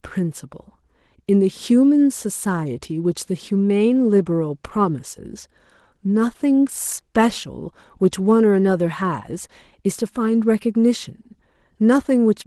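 Speech, carrying plainly audible Opus voice compression throughout: hoarse and slightly robotic, consistent with hybrid coding near 16 kbps. A spectrogram shows coarse, patchy energy above 8 kHz.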